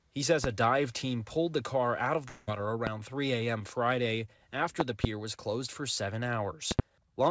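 A voltage step or pulse, likely from a plug, switch, static or driver glitch, lands on the signal four times: single loud pops at 0.44 s and 2.87 s, then pairs of pops between 4.80 and 5.07 s and between 6.71 and 6.82 s. Each one peaks about 20 dB above the sound, which carries on beneath it. At 2.28 s a long network dropout, likely a stall in packet delivery on this call path, leaves the receiver with no audio. It stretches the last sound into a fading buzz or hiss for about 0.19 s until 2.49 s, and roughly 0.2 s of material never returns. The call path's G.722 coding at 64 kbps contributes its own coding noise and leaves nothing above 8 kHz.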